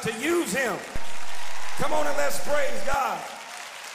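At 0.96 s a DC step occurs. The waveform's zero line suddenly jumps by about -18 dBFS and holds there. It steps back at 2.94 s. Each jump gives a low thump or click. The sound itself carries on unchanged through both.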